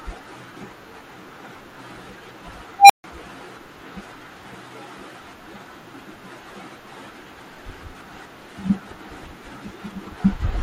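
A speech recording with one nasty moment: at 2.79 s an unstable filter takes over. A tone somewhere around 700 Hz swells out of nowhere and hits clipping in about 110 ms, then the output simply drops to nothing for roughly 145 ms until the sound returns at 3.04 s. That's a recursive filter fed bad coefficients running away, overflowing, and going dead until it resets.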